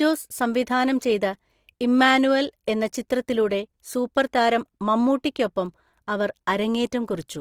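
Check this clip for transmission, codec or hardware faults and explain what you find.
One codec fault runs through the whole clip; no transmission dropouts or hardware faults are audible.

Opus compression, throughout: the speech keeps its full bandwidth but sounds plainly grainy and rough, with a noisy texture in place of clean tonal detail. The likely cause is Opus running in its music mode at a low rate, consistent with around 24 kbps. When bits run short, the encoder preserves each band's energy but fills the band's fine structure with folded or noise-like content, so harmonics come out hazy rather than leaving spectral holes.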